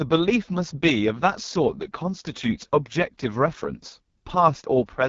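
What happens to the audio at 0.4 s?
At 0.4 s the speech is passing through the AMR wideband (HD Voice) codec, which affects the whole clip rather than that instant. The codec models the speech below 6.4 kHz with a pulse-excited vocal tract filter and substitutes shaped noise up to 7 kHz, with nothing above about 7.3 kHz. The damage is heavy: the speech sounds rough and raspy, which fits the codec's lowest 6.6 kbit/s mode.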